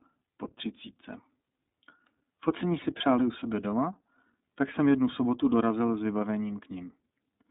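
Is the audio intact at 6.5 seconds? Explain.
No. At 6.5 s, as throughout, the speech carries iLBC codec damage. Each 30 ms frame's excitation is coded independently, which fits the 13.33 kbps mode, giving a rough, synthetic texture. The band runs 200 Hz to 3.7 kHz, with nothing above 3.8 kHz.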